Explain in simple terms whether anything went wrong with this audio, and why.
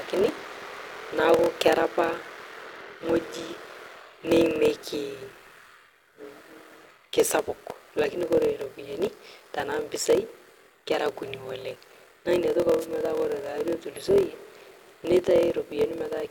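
Two things went wrong in this speech clip. The first is a block size mismatch (padded). One stage handed over chunks of sound that were too short, which fits 1024-sample blocks, and the gaps were filled with silence. That causes a steady buzz at 41.7 Hz, and everything plays at 0.889 times normal speed, with pitch roughly unchanged.

The second is a wireless microphone noise hit. From 12.79 to 12.86 s, a burst of static swishes over the voice for about 70 ms. The microphone's radio signal briefly faded, and the receiver's own noise rose up to fill the gap.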